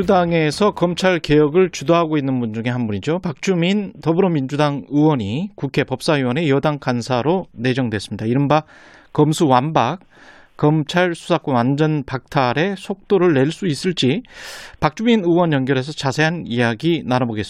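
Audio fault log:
No faults heard.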